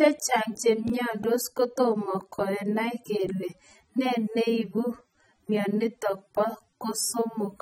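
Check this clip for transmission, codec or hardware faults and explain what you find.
Two kinds of fault are present: a dulled, smeared texture across the whole speech clip, and two brief dropouts to digital silence.

AAC compression (likely cause): Throughout, nothing is present above 15.9 kHz, and the speech has a smeared, warbling quality with fizz on sibilants. A perceptual codec such as AAC-LC at a low bitrate spends too few bits on each frame, so it lowers the bandwidth and quantises bands coarsely. The damage is plainly audible, which fits a rate around 24 kbps. Unlike a simple low-pass filter, which only dulls the sound, this texture shifts and warbles over time.

Block of digital silence: At 0.90 s and 3.52 s the signal drops to silence for 1.34 ms and 1.97 ms. A short run of samples was never written, typically because the output buffer was not filled in time, so the waveform snaps to silence and back with no fade. 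Each gap is heard as a tick or dip rather than an audible hole. Unlike a packet-loss concealment glitch, nothing is smoothed over or repeated, and the cut sits at both edges of a silent gap.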